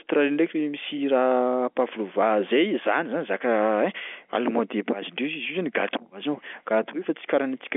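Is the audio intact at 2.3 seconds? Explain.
Yes, at 2.3 seconds the audio is intact, with the speech carried cleanly through its G.711 telephone coding and no fault at that moment.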